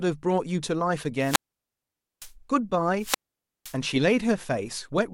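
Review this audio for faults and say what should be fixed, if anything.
Wireless microphone squelch dropout occurs twice in the speech, from 1.18 to 2.34 s (mute about 0.86 s) and 2.97 to 3.77 s (mute about 0.51 s). The FM signal fades, hiss rises, and the receiver's squelch cuts the output to near silence before the voice returns. Fix the RF path with better antenna placement, shorter range and a clear frequency.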